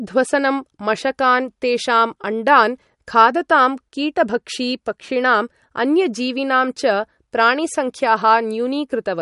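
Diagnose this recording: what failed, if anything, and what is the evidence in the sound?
The codec stage likely failed: MP3 compression throughout the speech, with nothing above 11.2 kHz and a watery, swirling texture as weak frequency lines drop in and out between frames. This fits a starved bitrate near 48 kbps. Unlike a plain low-pass filter, the fixed cut-off comes with that frame-to-frame flicker.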